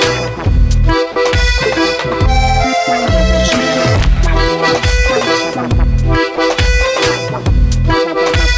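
At 0.44–0.46 s, 1.12–1.16 s and 6.36–6.38 s the music briefly gives way to steady comfort noise, 20, 40 and 20 ms long. This is likely sound dropped by the voice detector, which treated the music as background. The call path cuts everything above 8 kHz.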